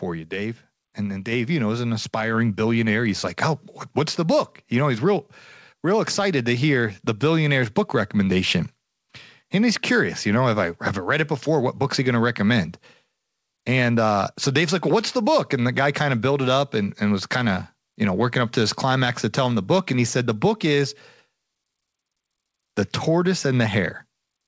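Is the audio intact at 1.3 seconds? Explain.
No, there's a microphone volume stepped up fault at 1.32 s, between "and then" and "you know is an". The input gain jumps about 4 dB in one go, lifting the voice and background together.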